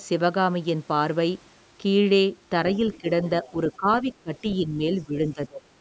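A speech recording from a call, and from 2.7 to 3.0 s and again around 3.45 to 3.49 s you can pick out the other side's voice leaking through, faint and well under the talker, something like 25 dB down. That's most likely the far end playing on the loudspeaker and the echo canceller not scrubbing all of it out of the mic, so scraps of the second voice ride along. Right after each of those, the talker's own speech starts dipping: speech suppressed in double talk at 3.01 to 3.07, 3.5 to 3.56, 3.77 to 3.87, 4.22 to 4.44, 4.62 to 4.81 and 4.98 to 5.67 s. The drops run roughly 5 to 20 dB, and the longest and deepest one comes at the end. With both sides talking at once, the canceller likely couldn't tell the talker from the echo and just turned everything down, so the voice ducks.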